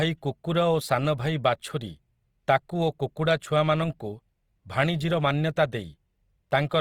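Speech throughout with plainly audible Opus compression, likely at about 24 kbps in music mode: tones sound grainy and rough, and the spectrogram shows noise-filled bands with few holes, extending to 20.2 kHz.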